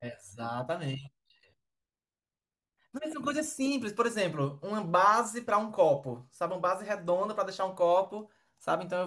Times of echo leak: none

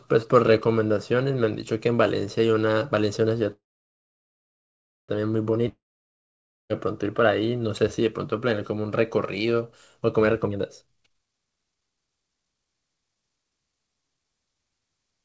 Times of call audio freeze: 3.52-5.10

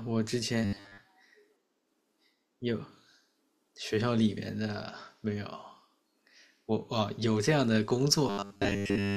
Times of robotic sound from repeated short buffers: 0.65-1.00, 8.28-9.16

